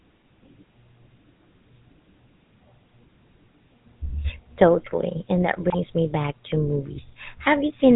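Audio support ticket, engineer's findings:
GSM full-rate codec, whole clip: buzzy, gravelly speech with no content above 4 kHz, damage plainly audible. The character fits 13 kbit/s full-rate coding: the vocal-tract filter is excited by a regular pulse train built from every third sample, so fine detail is lost.

GSM bit errors, 5.70 to 5.76 s: brief squawk and gargle. This points to corrupted decoder parameters. Flipped filter, pitch or gain bits distort the spectrum and level for about three 20 ms frames, consistent with an error rate near 2.7%.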